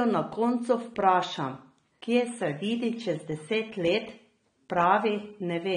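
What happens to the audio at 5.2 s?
At 5.2 s the speech sounds dull and smeared, with a fizzy, warbling edge and nothing above 9.7 kHz. That is AAC compression, present across the whole clip, and likely AAC-LC at a low bitrate, which fits about 32 kbps, lowering the cut-off and coarsely quantising what remains.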